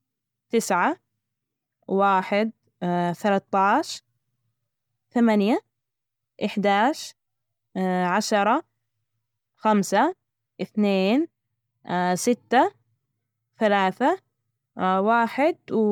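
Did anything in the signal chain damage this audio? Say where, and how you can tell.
Yes, at the codec stage: the speech sounds swirly, hollow and smeared throughout, with blurred consonant attacks, though content reaches about 20.1 kHz. That points to generation loss, likely from several MP3 passes near 128 kbit/s, each re-quantising on a shifted frame grid. A single encode wouldn't sound this degraded at that bandwidth.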